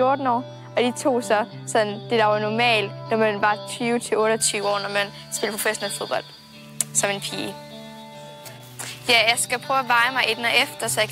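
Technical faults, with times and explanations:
4.42–11.12 s, pre-emphasis left on: from 4.42 s the treble rises by about 11 dB at 10 kHz relative to 1 kHz, a tilt that fits J.17 emphasis. The boost added before transmission was never undone by the matching de-emphasis, so the sound turns thin, bright and hissy.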